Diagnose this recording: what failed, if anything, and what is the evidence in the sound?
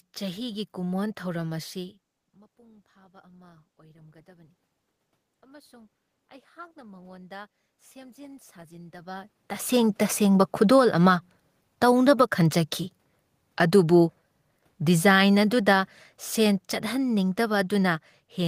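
The automatic gain rising fault sits in call processing. After the talker moves away near 2 s, the input drops about 24 dB, and the gain climbs about 5 dB over 2.3–4.54 s, then about 8 dB over 5.27–11.39 s. The room noise swells with the voice, so on a waveform the noise floor and speech envelope ramp up together.

The automatic gain falling fault is also in call processing. The gain drops about 5 dB over 10.49–11.02 s and sinks again from 14.87 s to the end. The level sinks, with the background falling in step, so a spectrogram shows the whole band, noise included, dimming gradually rather than stepping down.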